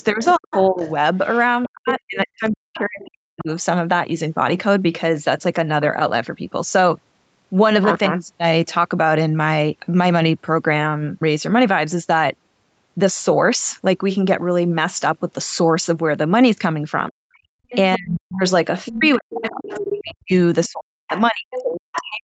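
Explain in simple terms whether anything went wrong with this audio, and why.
Three problems appear at the start and end of the clip, all pointing to a call's echo canceller struggling while both sides talked.

Other side's voice leaking through: from 0.0 to 3.4 s and again from 17.3 s to the end, a second, fainter voice sits under the main talker. It is likely the far end playing from a loudspeaker and not fully removed by the echo canceller.

Speech suppressed in double talk: from 0.1 to 3.5 s and from 17.1 s to the end, the main talker's speech dips sharply and nearly vanishes at its worst. Over the opening stretch, about two seconds in total are affected. The likely cause is the canceller turning everything down because it could not tell its own talker apart from the echo.

Background gated by the echo canceller: for about a fifth of a second, between 17.43 and 17.62 s, the room sound drops out almost completely and then returns. 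The canceller clamped the microphone hard while the loudspeaker was playing.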